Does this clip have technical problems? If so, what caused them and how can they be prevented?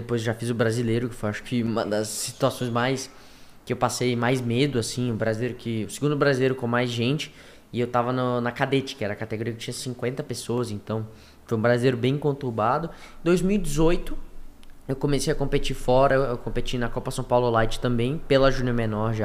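Yes. Single sharp clicks at 5.09, 10.58 and 18.59 seconds are most likely dropped samples: a fraction of a millisecond of the stream goes missing, so the waveform jumps straight to a later value. Unlike a dropout, no audible stretch of sound disappears. Each event is only an isolated click, a thin vertical line in the spectrum. Prevent it with larger buffers and stable clocking so the capture or playback chain never skips samples.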